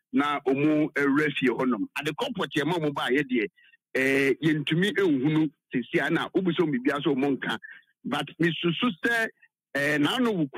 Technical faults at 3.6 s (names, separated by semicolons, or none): sound cut by the noise suppressor